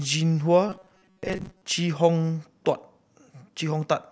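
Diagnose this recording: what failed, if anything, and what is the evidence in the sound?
From 0.69 to 1.64 s the speech collapses into a rigid, metallic buzz at 188 Hz: robotic sound from repeated short buffers, likely a driver or buffer underrun replaying a roughly 5.3 ms block for most of that span. A spectrogram shows evenly spaced harmonic lines, and the waveform shows identical repeating cycles.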